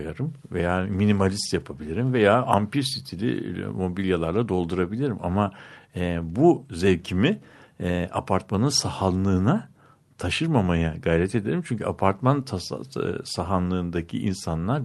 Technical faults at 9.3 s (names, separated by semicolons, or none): none